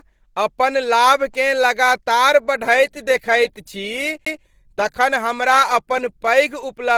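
From start to finish the speech has a grainy, hoarse roughness rather than the watery swirl of MP3, with bandwidth still reaching about 20.2 kHz. This points to Opus compression, likely in its hybrid mode at a low rate that fits 16 kbps, filling starved bands with noise.

At 4.25 s a CD skip cuts in: a tick and a very brief mute, roughly 15 ms, as the laser jumps to another turn of the spiral. Unlike a plain dropout, playback resumes from a different point, so the speech lurches rather than simply pausing.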